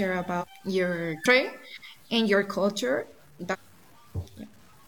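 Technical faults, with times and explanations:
Throughout: low bit depth without dither. The audio was likely cut down to very few levels, which fits an 8-bit signal truncated with no dither, so the rounding error tracks the speech itself. Quiet passages turn gritty and grainy, with distortion sitting roughly 35 dB below the signal and shifting as the sound changes.
0.38–0.44 s, 1.21–1.26 s and 3.49–3.55 s: damaged data in a compressed stream. Corrupted bytes in these stretches made the decoder misread frames, lose sync and hunt for the next valid header. Each event comes out as a brief disruption, about 50 to 70 ms long.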